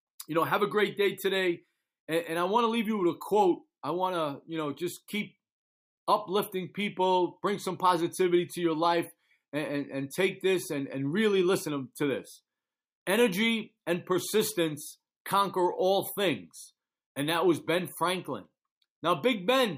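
No technical faults can be heard anywhere in the recording; the signal holds steady throughout, with nothing interrupting or altering it.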